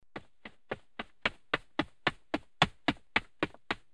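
No technical fault can be heard anywhere in this audio. There are no times or causes to report.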